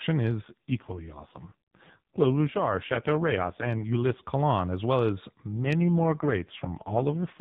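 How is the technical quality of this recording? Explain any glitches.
Two AMR rate drops degrade this narrowband AMR-NB speech, which has nothing above 4 kHz. From 0.42 to 4.24 s, and again from just after "as well as" at 5.56 s to the end, the speech turns rougher, buzzier and more synthetic, which fits the codec stepping down from 12.2 to 4.75 kbps to spend bits on error protection. The band edge stays put and there are no gaps. A spectrogram shows blurrier, smeared harmonics within the same band, and the waveform stays continuous.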